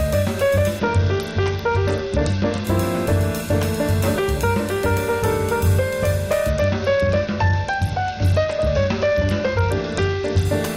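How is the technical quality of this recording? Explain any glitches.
The recording has two stretches of Bluetooth SBC bit pool drop, from 0.79 to 2.65 s and from 6.49 to 10.45 s. In each, the sender appears to have cut the SBC bit pool, with the sound pointing to a fall from about 28 to 8, near 72 kbps. With so few bits, the upper sub-bands go largely unfilled and the remaining bands are coarsely quantised. The treble turns dull and a gritty grain rises until full quality returns.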